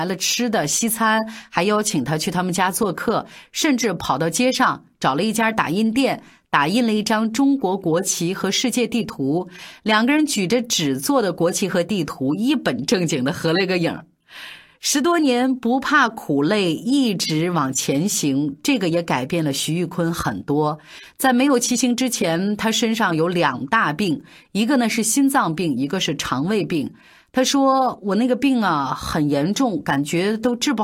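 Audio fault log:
Nothing to log here, as no faults turn up anywhere in this speech recording.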